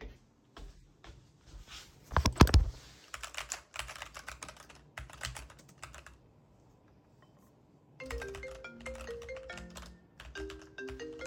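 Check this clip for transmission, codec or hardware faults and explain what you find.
No faults turn up in this clip.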